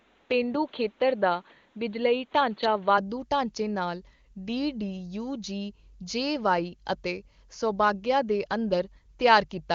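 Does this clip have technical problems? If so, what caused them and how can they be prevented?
Yes. From the start to about 2.98 s the speech is dull and boxy, with nothing above 4.5 kHz and a faint new noise floor about 35 dB below the signal. It opens out suddenly, with no gap or level jump, just before "ਢਾਂਚੇ ਨਾਲ". This is likely an input switched to a poorer device, and the HD Voice codec carries the wider band that follows. A steady filter or codec limit would dull the whole clip; here the tone and noise change together at one moment. Locking the input device in the system settings before recording prevents it.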